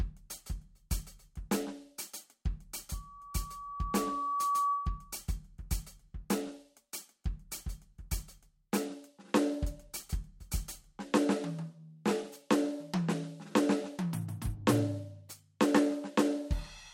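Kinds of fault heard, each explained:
Loudspeaker feedback squeal: The microphone hears its own loudspeaker, and a 1.1 kHz tone runs away. It swells over about a second and a half, then sits about 5 dB above the music.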